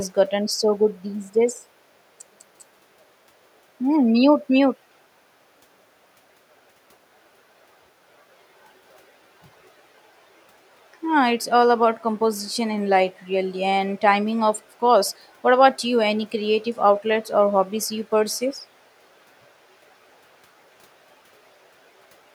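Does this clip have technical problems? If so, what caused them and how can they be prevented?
No technical faults are audible.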